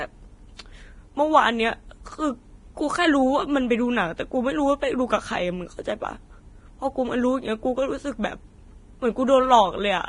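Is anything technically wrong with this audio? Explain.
Yes. Throughout the speech, nothing reaches above 10.6 kHz, and the upper band is hissy and grainy, with roughened tones and softened consonant attacks. This is likely heavy Vorbis compression at a low bitrate, around 28 kbps, where coarse treble quantisation turns detail into noise. A spectrogram would show a hard ceiling at 10.6 kHz with speckled, smeared energy beneath it.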